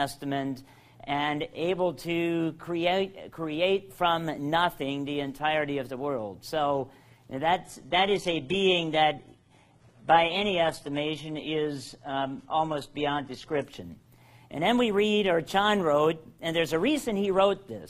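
At 7.65 s the audio suddenly dulls, with no dropout, and stays that way for about six seconds until 13.65 s, when it snaps back just as abruptly. That's an adaptive stream dropping to a lower bitrate, almost certainly because the connection slowed. Nothing survives above 11.8 kHz, and the top end sounds thin and smeared. It points to a switch from something like 96 kbit/s AAC to a very lean HE-AAC stream around 16 kbit/s.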